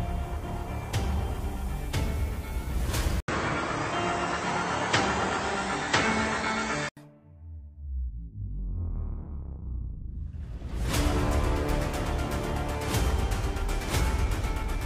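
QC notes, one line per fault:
3.20–6.97 s, input switched to a poorer device: after a gap of about 80 ms the sound turns duller, with nothing above 8.3 kHz, a level shift of roughly 5 dB and a new faint noise floor. It clears at 6.97 s. The likely cause is recording moving to a narrower-band microphone and back.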